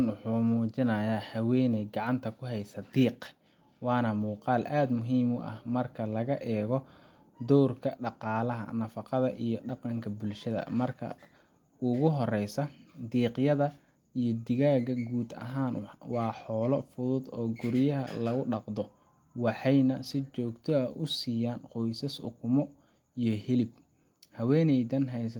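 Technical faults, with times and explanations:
No technical faults are audible anywhere in the speech recording.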